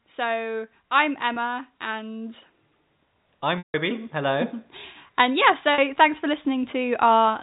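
Automatic gain rising runs from 0.05 to 2.38 s: the gain control judged the input too quiet and lifted it by about 5 dB, so speech and background swell together over those seconds. The same slow rise of about 4 dB returns from 5.17 to 7.38 s. Packet loss with pitch repetition occurs at 1.34 to 1.36, 3.58 to 3.74 and 5.74 to 5.78 s. Missing audio is bridged by repeating the last pitch period. The 20 ms and 40 ms gaps sound like a brief buzzy hold. The 160 ms gap, which fits eight lost 20 ms packets, fades to silence before speech cross-fades back in. Throughout, G.711 telephone coding limits the band to 4 kHz.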